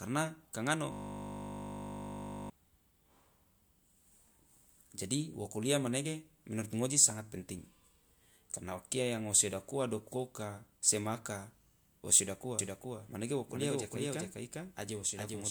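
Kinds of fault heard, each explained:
System hang loop: from 0.92 s to 2.50 s, just after "ka ngano", one 20 ms slice of audio repeats exactly, dozens of times, as the driver stalls. The 50 Hz loop rate gives a steady buzz rather than a machine-gun stutter.
Doubled audio track: from 12.59 s, after "wo siodak", to the end, a full-band copy trails about 0.4 s behind at about 5 dB lower, likely from a second, slower capture path. Unlike echo or reverb, it has no decay or room colour and starts abruptly.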